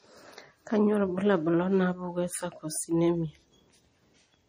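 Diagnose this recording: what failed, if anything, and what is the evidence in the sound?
The codec stage failed: plainly audible MP3 compression throughout the speech, likely from too few bits, which fits roughly 40 kbps. Nothing above 15.2 kHz, plus weak frequency lines flickering frame to frame, gives watery swirl and smeared attacks; a plain low-pass filter leaves no swirl.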